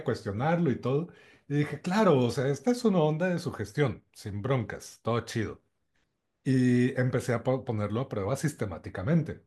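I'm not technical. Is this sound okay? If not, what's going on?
Yes, no faults heard.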